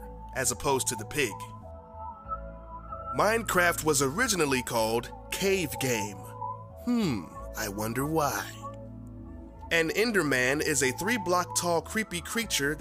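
No technical faults can be heard anywhere in the recording; the signal holds steady throughout, with no interruptions, distortion or disturbances.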